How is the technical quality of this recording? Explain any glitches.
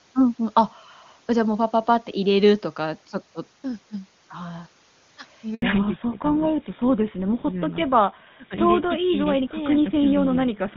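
The call audio carries two related faults around the 5.5-second mark: a brief dropout followed by a permanent loss of high frequencies. Before that, the AMR wideband (HD Voice) codec sounds clean, which fits its top rate of around 23.85 kbit/s.

A handover gap runs from 5.54 to 5.62 s, about 80 ms. While the phone switched networks, no speech frames arrived, so the sound fades almost instantly and goes silent. On a waveform this is a flat stretch. On a spectrogram it is a blank vertical band.

Fallback to narrowband follows from 5.62 s to the end. After the handover, the call dropped to an older codec, most likely GSM full rate at 13 kbit/s, so nothing above 4 kHz survives. The speech turns duller and rougher. A spectrogram shows the upper energy abruptly cut at a flat 4 kHz ceiling.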